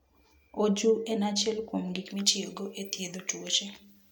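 Pre-emphasis left on affects this speech clip from 2.06 s to the end. For that stretch the treble stands about 11 dB higher at 10 kHz than at 1 kHz, so the sound turns thin, bright and hissy, with sibilants that jump forward. The high-frequency lift applied before recording or transmission was never undone by the matching de-emphasis on playback, and the shape of the tilt points to a J.17-style curve.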